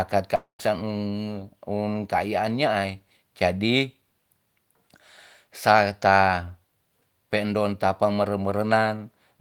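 Speech, interrupted early by what is likely a long network dropout, where incoming audio stopped arriving from 0.35 to 0.61 s. The receiver stretches the last sound into a fading buzz, then about 120 ms of silence follows, and roughly 240 ms of speech never returns.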